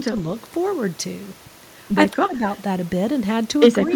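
Speech suppressed in double talk at 0.05 to 0.17 s and again at 2.12 to 2.43 s: the speech dips, by roughly 10 dB in the first and about 5 dB in the second, most likely because an echo canceller could not separate the local talker from the loudspeaker echo during simultaneous talk and turned both down.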